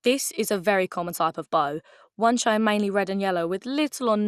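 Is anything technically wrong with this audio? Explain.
Yes. The speech carries MP2 compression damage from start to finish, and it is plainly audible. Nothing reaches above 15 kHz. The top sounds dull. The upper sub-bands drop in and out, and the rest have a gurgling, grainy roughness. The likely cause is MPEG Layer II coding at too few bits, which fits a rate near 80 kbps. The coder splits the sound into 32 bands and shuts off the highest ones. The bands it keeps are quantised coarsely.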